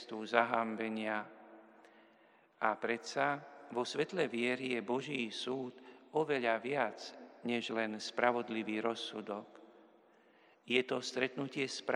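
No technical fault can be heard anywhere in the audio.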